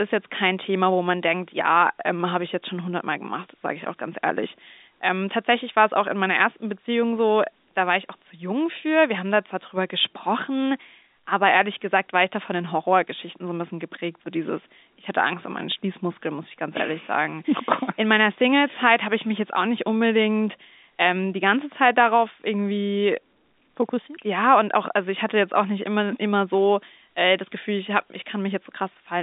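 Speech carried on a G.711 telephone channel, band-limited to about 200 Hz to 3.7 kHz with nothing above 3.8 kHz; no faults found.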